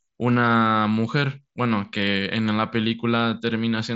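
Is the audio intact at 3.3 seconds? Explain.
Yes, the speech at 3.3 seconds is intact, carried cleanly through the wideband Bluetooth mSBC headset path with nothing above about 7.7 kHz.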